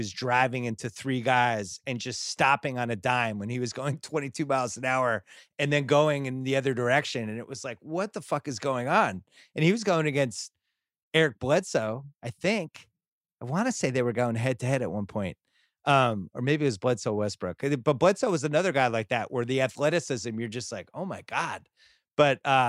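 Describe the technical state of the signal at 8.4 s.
Around 8.4 s the speech signal is intact, with no dropout, clipping, distortion or other fault to be heard at that point.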